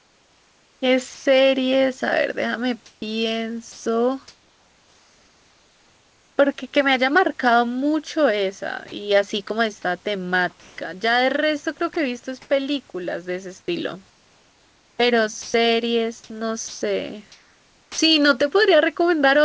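From 0 to 1.26 s, the room's background gives way to a steady, even hiss. Its texture is flat and detail-free, and the real room noise sits about 37 dB below the speech. This is comfort noise in place of the background. The likely cause is discontinuous transmission: the sender went quiet in a pause, and the receiver made up noise to fill the gap.

Inside that stretch, from 1.14 to 1.26 s, 120 ms of sound is lost. The speech is swallowed by the same flat noise. This is sound dropped by the voice detector. The detector likely took quiet speech for background and held off sending until it triggered.

From 2.86 to 6.38 s, the background again turns synthetic for about 2.4 s in total. It is the same featureless hiss in place of the real room.

Within it, from 3.72 to 3.86 s, another 140 ms of sound drops out under the noise. It is a second case of sound dropped by the voice detector.

From 8.88 to 12.5 s, the speech turns choppy. 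Short pieces, about 340 ms in all, give way to flat noise. This is sound chopped by the voice detector. The detector likely switched between sending and not sending more than once, clipping quiet syllables and word edges.

From 14.1 to 17.98 s, the chopping returns and is much heavier. About 1.8 s of the stretch is replaced, so whole runs of sound vanish into steady hiss before speech breaks through again. Throughout, nothing reaches above 8 kHz, which fits a G.722 call codec at 64 kbps.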